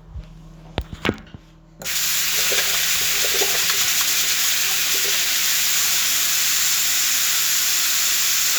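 Nothing technically wrong turns up anywhere in this recording of sounds; there's just nothing here to flag.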